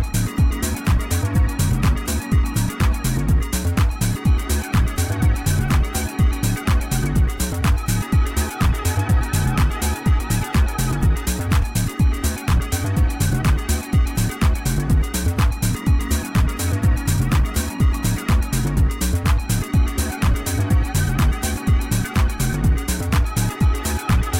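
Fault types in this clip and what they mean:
No technical faults are audible anywhere in this audio.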